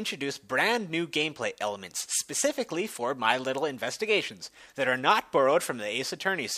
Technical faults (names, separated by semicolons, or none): none